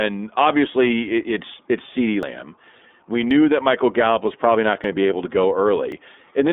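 iLBC codec, throughout the 6.5-second speech: every 30 ms frame is coded on its own, which fits the 13.33 kbps mode. Nothing passes above 4 kHz, the band sits near 250 Hz to 3.6 kHz, and the voice sounds plainly rough and synthetic.

Dropped buffers at 2.23, 3.31, 4.84 and 5.92 s, the third between "was probably not" and "to be able to": at each the sound jumps ahead, with no gap. The likely cause is an overrun, where audio was overwritten before being read. About 40 ms vanishes at 2.23 s and about 10 ms at each of the others.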